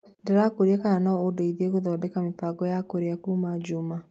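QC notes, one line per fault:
0.02–0.15 s and 0.79–0.83 s, echo leak: a far-end echo canceller likely let loudspeaker pickup through, so faint speech copies return about 298 ms late, roughly 25–30 dB down.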